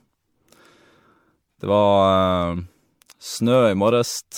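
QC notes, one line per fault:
Throughout, generation loss: swirly, hollow, smeared speech with blurred attacks, likely from about seven MP3 re-encodes near 96 kbit/s, quantisation noise compounding with each pass.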